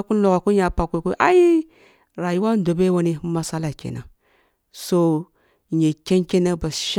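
Nothing in this speech recording stands out as a technical fault; it runs along without any glitch worth pointing to.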